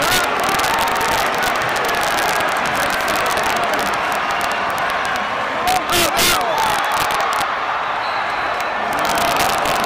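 Integer overflow runs through the whole clip. Gain about 6 dB past the integer limit made roughly one percent of samples wrap to the opposite sign instead of being limited, so peaks crack sharply. The waveform shows peaks flipping across the range; the spectrogram shows broadband vertical streaks at each.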